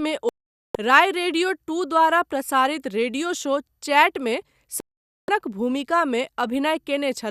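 At 0.29 s the speech cuts to silence. It returns at 0.75 s, so nearly half a second is gone. This is a digital broadcast dropout. The receiver lost usable frames and muted until clean ones arrived, which points to a run of roughly twenty bad frames. The same thing happens again from 4.80 to 5.29 s. Both holes are clean silences, and the programme carries on from a later point.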